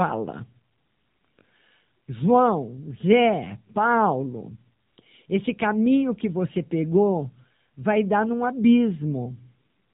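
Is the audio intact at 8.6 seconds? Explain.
No. At 8.6 seconds, as through the whole clip, the speech is carrying AMR narrowband mobile codec damage. The codec rebuilds the voice from a vocal-tract model driven by a few pulses per short frame, and at this rate it sounds plainly buzzy and synthetic, which fits a low bitrate of about 7.4 kbps. Nothing above 3.8 kHz comes through, so the top end is gone and everything sounds boxed in, like a phone call.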